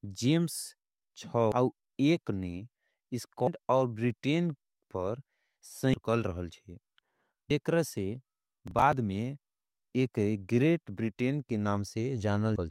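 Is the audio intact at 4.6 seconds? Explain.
Yes, the audio is intact at 4.6 seconds, with no dropout, click, distortion or other fault audible at that moment.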